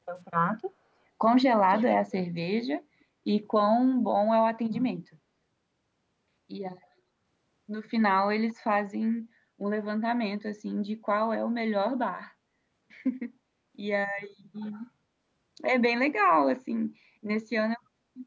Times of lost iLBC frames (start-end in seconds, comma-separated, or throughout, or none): none